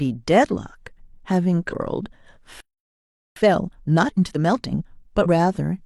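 Speech, with two kinds of interruption and a hurried recovery between them. Damaged data in a compressed stream appears twice, from 1.68 to 1.73 s and from 5.21 to 5.26 s, each a brief disturbance of roughly 50 ms. Corrupted bytes leave the decoder unable to parse those frames, so it emits garbage, loses frame sync and resumes only when it finds the next valid header, discarding the audio in between. At 2.60 s the sound stops in mid-flow and stays silent for 0.76 s, until 3.36 s. This is a playback stall, and the likely cause is a starved input buffer or a blocked playback thread, leaving the output with nothing to play until data arrives again. From 3.36 to 4.86 s the speech runs hurried at 1.5 times normal speed, with its pitch unchanged. This is time-compressed catch-up: to absorb the backlog built up during the stall, the player cuts out short segments and cross-fades the remaining pieces together. 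The pitch holds because the audio is never resampled. Normal pacing returns at 4.86 s, once the player has caught up with where it should be.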